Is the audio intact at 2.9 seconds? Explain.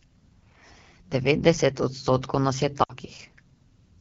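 No. From 2.83 to 2.92 s the speech drops to near silence within two frames, and the voice comes back weak or rough. This is lost AMR speech frames: about 60 ms failed, which fits three 20 ms frames, and the decoder filled the gap by repeating the last good pitch and vocal tract settings at falling gain.

Underneath, the speech has a rough, raspy texture throughout, including at 2.9 s. This comes from the AMR wideband (HD Voice) codec running at one of its lowest modes, which fits about 8.85 kbit/s. It models speech only up to 6.4 kHz and fills the band above that with shaped noise.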